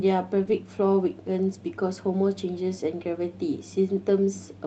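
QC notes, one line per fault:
0.43–0.53 s, lost packet rebuilt from error correction: three separate packets were lost, and the decoder filled about 60 ms from the low-bitrate copies carried in the following packets, so there is no gap, but the Opus call audio (around 8 kHz bandwidth) briefly turns rougher and noisier.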